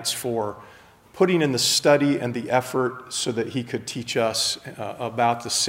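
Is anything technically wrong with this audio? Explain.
No, no technical faults here.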